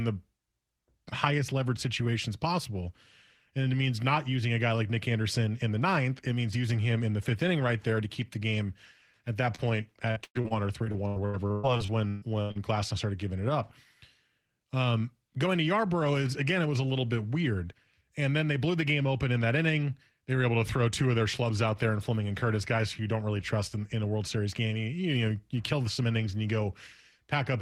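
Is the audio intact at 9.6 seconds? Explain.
No, there's a short concealed packet loss from about 9.55 to 9.65 s, right after "the game at that". Roughly 20 ms of audio never arrived, so the decoder extended the preceding sound to bridge the gap, then crossfaded back. You hear a quick smeared wobble there.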